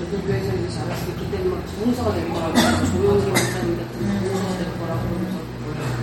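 Heavy lossy encoding, likely MP3 compression at a low bitrate that fits about 48 kbps, runs through the whole everyday-sound clip: the treble stops dead at 16.5 kHz, and weak frequency detail flickers between frames, leaving a plainly audible watery, swirling texture with smeared attacks.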